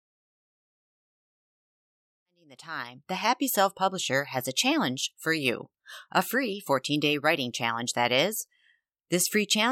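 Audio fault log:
Nothing stood out on listening to this speech, which comes up in a smooth fade that begins around 2 s and reaches full level by 3.72 s.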